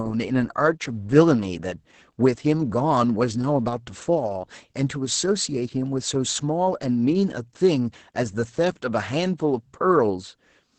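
Throughout the speech, Opus voice compression in its SILK mode leaves nothing above 8.6 kHz, and the coarse excitation coding makes the voice hoarse, muffled and faintly robotic, pointing to roughly 10 kbps. Unlike a plain low-pass filter, this texture damage goes beyond mere dullness.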